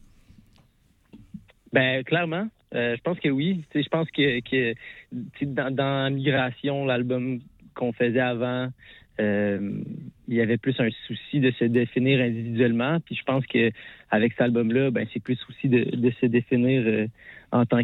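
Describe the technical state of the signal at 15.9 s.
At 15.9 s the signal is intact, with no technical fault present at that moment.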